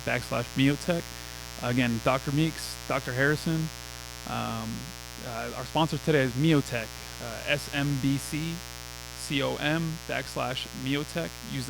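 From start to finish, a mains buzz sits under the speech, fairly prominent at roughly 15 dB below it. Sharp switching spikes, entering through a rectifier, dimmer or unshielded path, arrive twice per 60 Hz cycle, so 120 times a second. They spread harmonics of 60 Hz up into the kilohertz range. That rich upper content makes it a raspy, edgy buzz rather than the smooth, low, tone-like drone of plain hum.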